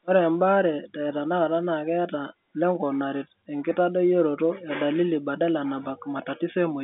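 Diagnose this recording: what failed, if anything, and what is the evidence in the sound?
Nothing failed in this recording: the speech comes over an ordinary G.711 telephone line, and there is no evidence of a fault in the sound.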